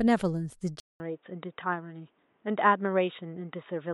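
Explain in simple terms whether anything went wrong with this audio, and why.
An input switched to a poorer device at about 0.8 s, and the sound stays that way to the end. There is a short gap, about 0.2 s, then the speech turns dull and boxy, with nothing above 3.8 kHz, the narrow range a headset call mode passes. The loudness stays about the same, but a faint new background noise appears. That combination points to the recording likely jumping to a different microphone.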